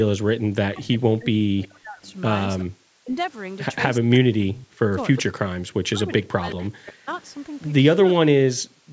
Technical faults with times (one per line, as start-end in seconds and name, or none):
0.23-0.37 background gated by the echo canceller
0.65-7.16 speech suppressed in double talk
1.62-2.64 echo leak
2.65-2.73 background gated by the echo canceller
4.54-5.23 echo leak
6.51-7.30 echo leak
8.15-8.86 speech suppressed in double talk